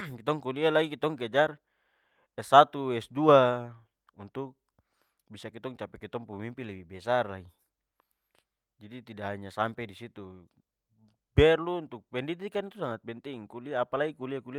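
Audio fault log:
No faults heard anywhere in this speech recording.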